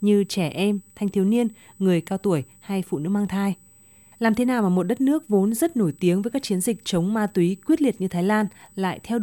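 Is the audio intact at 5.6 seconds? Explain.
No. A USB whine runs through the whole clip, so it is present at 5.6 seconds. It is a steady, fixed-pitch tone at 8 kHz, sitting well below the speech. The USB bus's 125-microsecond microframes pull current that leaks into the audio through power or ground.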